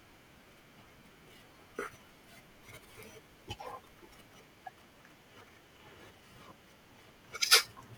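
At 3.83 s the speech jumps forward and a brief garbled glitch lasts about 26 ms, to 3.86 s. The same thing happens at 6.16 s, ending at 6.18 s. Each glitch is roughly one frame long and fits a 24 ms MP3 frame. The likely cause is a broken MP3 bit reservoir. Frames were lost, so the next frame reached back for borrowed data and decoded the wrong bytes.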